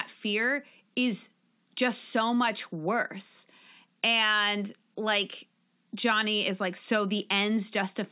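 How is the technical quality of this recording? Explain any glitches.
The recording has no technical glitches, and the speech signal stays continuous and intact throughout.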